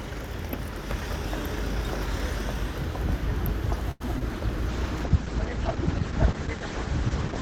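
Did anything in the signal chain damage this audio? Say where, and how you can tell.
Yes. From 3.91 to 4.02 s the sound hangs, held and faintly buzzy for 88 ms, then resumes with nothing skipped. This is a short stall from a late packet at the network and jitter-buffer stage: the buffer ran dry, so the receiver stretched the last audio until the packet arrived.

At 4.14 to 4.17 s and again at 4.19 to 4.23 s there are two brief smears, each covering 20 ms of lost audio. This is short concealed packet loss. The decoder extended the preceding sound to bridge each gap, and around the first one the buffer pulled its delay back by roughly 15 ms.

From 4.69 s to the end the sound turns rough and muffled, with the top end gone above 8 kHz where it had reached 20 kHz. This is a call bitrate drop. The bandwidth estimate fell and the Opus encoder went from 128 to 9 kbps, so it coded coarsely and narrowed the band.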